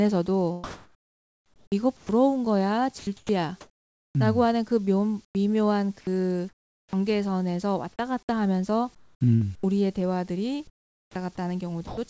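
From 0.64 to 2.09 s the pauses lose their real background: about 1.2 s of it gives way to comfort noise in place of the background, a steady, textureless hiss. The sender has likely stopped transmitting during silence, leaving the receiver to synthesise noise roughly matched to the room. On a spectrogram the fine, shifting grain of the background turns into an even, smooth wash, and the waveform settles into a flat, uniform band.

At the end of that stretch, 1.97 to 2.09 s, is sound dropped by the voice detector. About 110 ms of quiet speech was likely mistaken for background and replaced by the same synthetic noise, so the trailing sound simply vanishes into hiss. On the waveform the speech envelope stops short and a flat noise floor fills the gap. The spectrogram shows the harmonic striations ending abruptly against a featureless band.

Sound chopped by the voice detector recurs at 2.99 to 4.15 s, 4.85 to 5.35 s, 6.01 to 6.93 s, 8.95 to 9.63 s and 11.87 to 12.10 s. 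The detector likely toggled on and off within each stretch, so quiet syllables and word edges fall out. The spectrogram shows speech interrupted by smooth noise patches, and the waveform shows ragged gaps in the envelope.

At 10.67 to 11.15 s, about 0.5 s of background is again replaced by comfort noise, likely from the same transmission pauses. The real background sits about 36 dB below the loud parts, and the fill drops the level by about a further 18 dB, so the pause sounds quieter. On the waveform this appears as a thinner, even band, and the spectrogram shows a darker, uniform patch.

Throughout, the call path leaves nothing above 8 kHz, which fits a 64 kbps G.722 codec.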